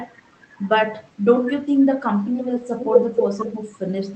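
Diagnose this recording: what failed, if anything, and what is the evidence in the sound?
The failure is in call processing: an echo with no canceller runs through the whole clip. Every phrase comes back about a third of a second later, roughly 17 dB down, and thinner. The far end's loudspeaker is feeding its microphone, and nothing subtracts it before sending it back.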